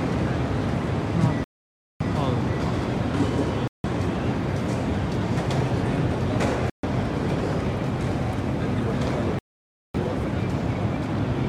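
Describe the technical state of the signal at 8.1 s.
At 8.1 s the signal is intact, with no audible dropout, distortion or other fault.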